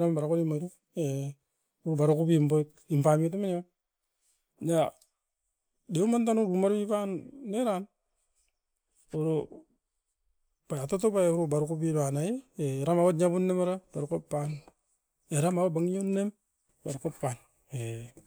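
No audible faults were found.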